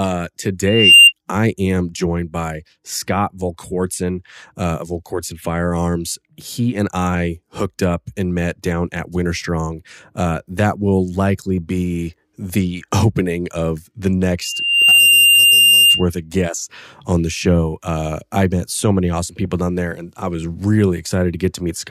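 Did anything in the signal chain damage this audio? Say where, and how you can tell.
Yes. A loudspeaker feedback squeal enters at the acoustic and analogue stage, where the microphone picks up its own loudspeaker. A 2.8 kHz tone swells from 0.66 to 1.13 s, just before "I am joined by", and again from 14.42 to 16.06 s, between "opening of the" and "of guests on the". Each time the loop gain passes one at 2.8 kHz. The tone grows over roughly a third to half a second and peaks about 10 to 15 dB above the speech. A spectrogram shows a bright horizontal line at 2.8 kHz. The waveform shows a dense, rising envelope.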